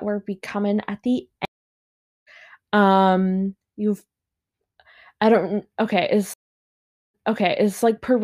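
At 1.45 s the speech drops out for 0.78 s. This is a stream reconnect. The connection broke, the player went quiet, then rejoined the stream with a fresh decoder. When sound returns at 2.28 s, it picks up about 0.7 s further on, so a stretch of speech is simply gone. A second stream reconnect starts at 6.34 s, with 0.75 s of silence. This time the server resent earlier data. The speech resumes 0.73 s back and repeats until 7.81 s.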